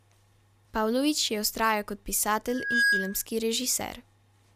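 Right after "je vztrajal kot", at 2.48 s, a loudspeaker feedback squeal kicks in: the mic is catching its own speaker, and the loop runs away at 1.6 kHz, swelling over about a third of a second into a tone a few dB above the speech before it's gone at 3.25 s.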